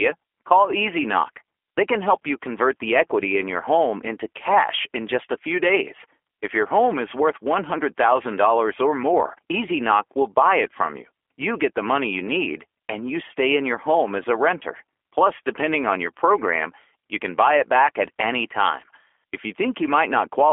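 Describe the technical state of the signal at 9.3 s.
At 9.3 s the speech carries G.729 codec damage, present from start to end of the clip. The codec does not store the waveform. It rebuilds each 10 ms frame from a vocal tract filter, a pitch predictor and a few pulses. The band runs from 300 Hz to 3.4 kHz, so the voice sounds thin and boxy. The roughness is plainly audible, with a buzzy, synthetic edge that points to an 8 kbit/s stream.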